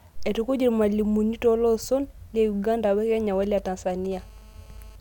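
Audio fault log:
3.43–4.07 s GSM signalling bursts: a galloping dit-dit-dit of brief 217 Hz buzzes, roughly 25 dB below the speech. A nearby 2G phone sends short groups of radio bursts, which the audio circuit rectifies. Spectrogram: clustered vertical stripes with harmonic combs. Waveform: spiky grouped pulses.
4.12–4.96 s GSM phone buzz: a steady, hard, raspy 217 Hz buzz about 31 dB below the speech, unrelated to it. The phone transmits in call mode, pulsing 217 times a second, and the circuit rectifies each pulse. Spectrogram: continuous evenly spaced harmonic comb up through several kHz. Waveform: regular pulse train.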